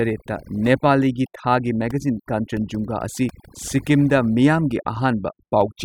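Throughout the speech, overdone noise removal leaves the background lowered and broken up into twinkling specks. Narrow bands near the noise floor were pulled down individually along with quiet voice detail. A noise gate would instead cut everything together.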